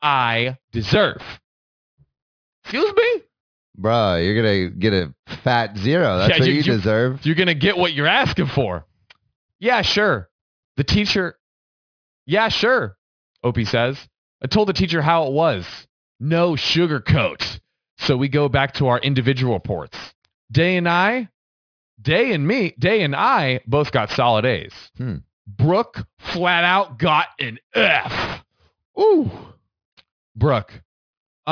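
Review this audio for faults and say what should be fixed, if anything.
Aliasing runs through the whole clip. The speech was resampled without an anti-alias filter, which fits a drop from 44.1 kHz to 11 kHz. Content above 5.5 kHz folds back as false tones, roughly 15 dB down. Sibilants turn gritty. Low-pass below 5.5 kHz before downsampling.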